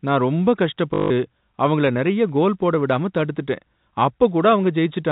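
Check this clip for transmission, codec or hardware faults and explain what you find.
One transmission fault is present, heard over a telephone-band G.711 channel.

Packet loss with last packet repeated, from 0.94 to 1.1 s: about 160 ms of audio went missing, which fits eight 20 ms packets, and the receiver replayed the last good packet to fill the gap. The run buzzes at about 50 Hz as a brief robotic stutter.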